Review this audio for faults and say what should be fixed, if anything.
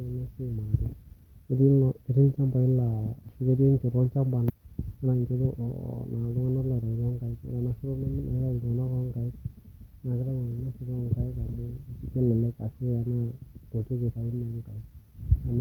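Roughly a second of speech was dropped, either in transit or by the jitter buffer when it overflowed, while later audio was already waiting. This is a skip ahead at 4.49 s: playback jumps forward with no gap, and the two sides are joined almost directly. Sizing the buffer for bursts would prevent this.

The jitter buffer still held more than its target, so it repeatedly cut short pitch-period pieces. These jitter buffer speed-ups leave speech hurried at unchanged pitch: 131% speed from 4.55 to 5.67 s (about 400 ms removed) and 110% from 6.16 to 7.53 s (about 150 ms). A gentler, capped drain rate would prevent this.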